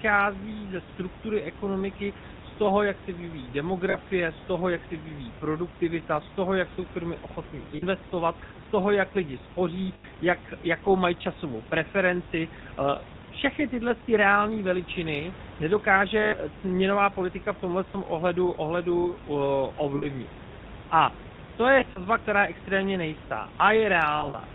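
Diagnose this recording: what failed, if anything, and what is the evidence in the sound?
The codec stage shows plainly audible GSM full-rate codec damage throughout. The speech has a buzzy, gravelly roughness, and it is band-limited below 4 kHz, which points to the 13 kbps full-rate coder. On a spectrogram, a hard ceiling appears at 4 kHz over the whole clip. The room noise sits about 18 dB below the speech.

Lost GSM frames in transmission cause brief metallic rings at 3.90, 7.76, 9.94, 16.22, 19.98, 21.80 and 24.18 s. They last 40 to 100 ms, and the last two are scattered over 160 ms. The decoder repeats the last good frame at falling level. In the waveform, a decaying repeated pattern shows at each of these times.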